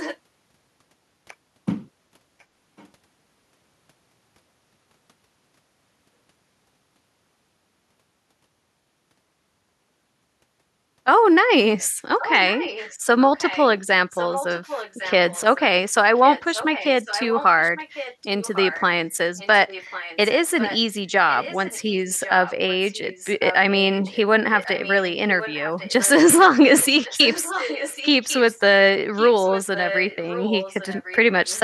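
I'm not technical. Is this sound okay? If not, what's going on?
No. Echo leak at 0 to 0.17, 2.4 to 2.88, 12.2 to 15.6, 16.16 to 26.1, 26.79 to 28.61 and 29.15 to 31.6 seconds: a quieter copy of the speech comes back about 1.1 seconds late, likely because sound from someone's loudspeaker reached their microphone and wasn't fully removed.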